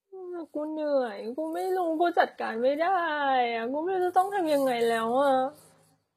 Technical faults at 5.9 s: low-bitrate audio saved at a high bitrate

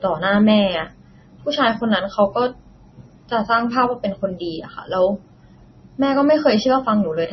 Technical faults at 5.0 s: MP3 compression

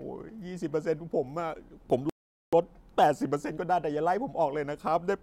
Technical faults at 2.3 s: playback stall

